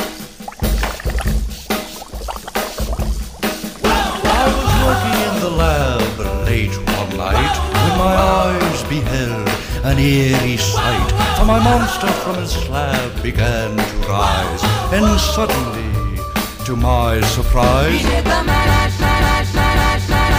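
No technical fault can be heard anywhere in this audio. Nothing in it calls for attention or repair.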